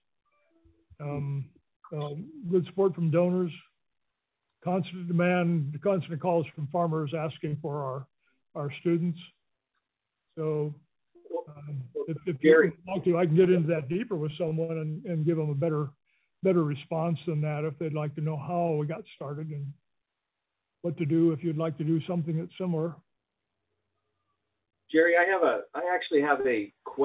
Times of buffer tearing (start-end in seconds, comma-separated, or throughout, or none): none